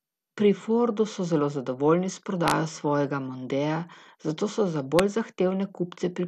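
Throughout the speech, nothing above 12.2 kHz, and a dull, gurgling graininess fits likely MP2 compression at roughly 80 kbps; a spectrogram shows upper sub-bands flickering on and off.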